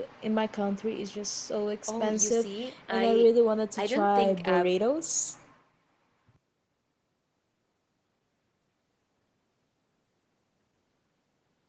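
Nothing stood out on listening to this speech recording; it has the limited top end typical of a call connection, and no technical faults were heard.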